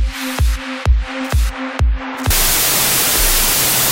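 From 2.31 s to the end of the audio, the sound turns into loud noise with the original buried underneath, running at half speed (0.5x) and an octave low. That is a wrong sample width fault, which fits 32-bit integer data being read as 16-bit. Each real sample is split into two values, doubling the count and halving the speed. The low halves of the samples come out as noise, and only the high halves keep the signal's top bits.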